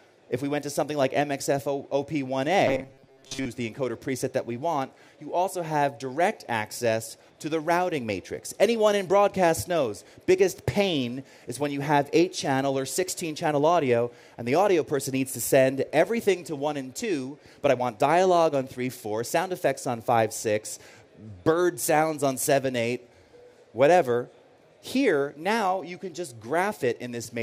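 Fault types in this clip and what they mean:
Robotic sound from repeated short buffers, 2.68 to 3.46 s: the sound collapses into a rigid, metallic buzz locked at 134 Hz that only loosely tracks the material underneath. This is likely because fresh audio arrived too slowly and the playback filled the gaps by looping a tiny stretch of roughly 7.5 ms over and over, skipping most of the real signal and stamping that fixed pitch onto it.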